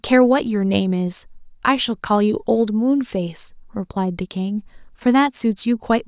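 Listening to the speech from beginning to end, nothing stood out as a technical problem at any point.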